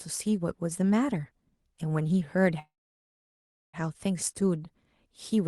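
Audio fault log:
2.59–3.76 s, call audio freeze: the sound breaks off into a brief fading fill, then about 1.05 s of silence, likely because held-up packets emptied the jitter buffer. Playback resumes where it stopped, so nothing is lost, but everything after arrives about 1.14 s late.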